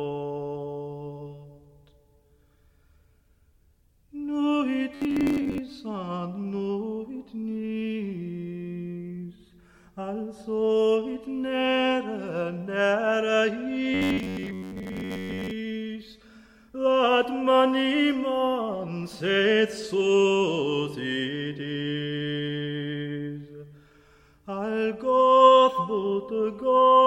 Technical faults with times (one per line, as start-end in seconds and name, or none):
4.95-5.58 robotic sound from repeated short buffers
13.94-15.53 robotic sound from repeated short buffers